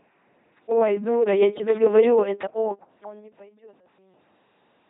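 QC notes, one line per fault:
throughout: LPC-10 vocoder, heavy damage. Buzzy robotic speech with stray hiss from pulse-or-noise excitation, nothing above 3.8 kHz; this synthetic buzz, not mere dullness, fits a 2.4 kbit/s coder.
1.67–1.77 s: loose connector crackle. An irregular scratchy burst lasting about 0.1 s as a contact makes and breaks, ragged and noisy rather than a clean digital dropout.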